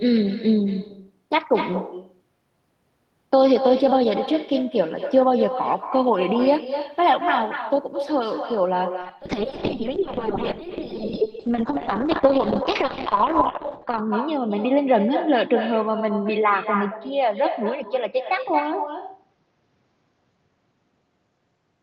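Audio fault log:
Throughout: echo with no canceller. Every phrase is trailed about a fifth of a second later by a fainter copy, about 9 dB below the direct speech, sounding thinner. The far end is playing the call through a loudspeaker, its microphone captures that playback, and nothing subtracts it before it is sent back. The copy returns after the network round trip and stacks a delayed shadow onto every syllable.
9.07 s to the end: call bitrate drop. The speech turns rough and watery, and its top end dulls as the audio bandwidth narrows from 20 kHz to 8 kHz, removing air. This fits the encoder being pushed from around 32 kbps down to roughly 7 kbps after the call's bandwidth estimate fell. At the lowest rate, which lasts 4.94 s, Opus codes far more coarsely and sheds high frequencies, and the sound does not recover before the clip ends.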